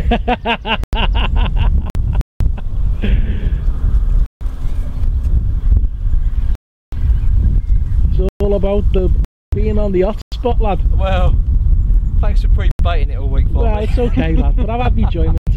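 At 0.84 s the sound drops into a block of digital silence for 93 ms, a hard cut, which fits a 4096-sample output buffer that wasn't filled in time. A shorter 50 ms one follows at 1.90 s. At 2.21 s a 190 ms hole opens, likely a Bluetooth stall, with the headphone buffer running dry while packets were resent. Another stall comes at 4.26 s (150 ms). At 6.55 s a long 370 ms silent block lands, consistent with 16384 samples. Then come a stall at 8.29 s (120 ms), a 280 ms block at 9.25 s, and stalls at 10.22 s (100 ms) and 12.71 s (80 ms). A final 93 ms block hits at 15.38 s.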